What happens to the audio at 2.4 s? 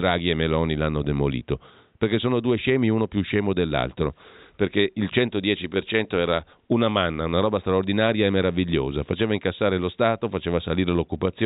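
Nothing goes wrong at 2.4 s: the speech is intact there, with only the room's own background noise sitting about 49 dB below it.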